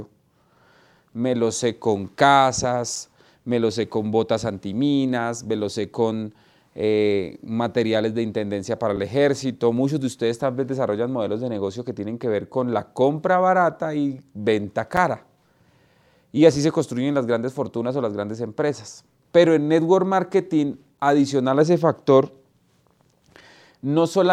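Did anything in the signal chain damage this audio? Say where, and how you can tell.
Yes. At the chunk-joining stage, in storage or playback, there is a gap between chunks of about 6.5 ms at 2.96, 8.96, 14.97 and 20.98 s, one every 6.0 s. These are hard-edged holes where nothing is lost but joins leave silence. Each shows as a flat-line notch in the waveform and a thin vertical blank stripe on a spectrogram.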